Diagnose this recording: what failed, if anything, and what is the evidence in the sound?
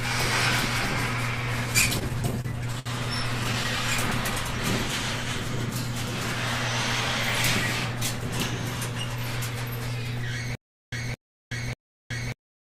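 Repeated stalls (stutter) appear at the network and jitter-buffer stage, from 1.81 to 2.88 s. The sound hitches nine times. Each time it holds and extends what it just played, and the longest hold is 62 ms. About 162 ms of the span is filled this way, around 15 percent. Nothing is dropped, so the audio drags rather than skips. Data arrived late or too slowly, and the buffer ran dry again and again. The receiver concealed each gap by continuing the last sound.

A stutter with silent gaps starts at 10.55 s and runs to the end. A 217 ms fragment plays, then about 373 ms of dead digital silence follows. The cycle repeats every 590 ms. The pace is even and mechanical. The audio that should fill those slots is gone. The stage is likely playback or streaming. The player stalls, replays its last buffered fragment on each retry, then empties out again.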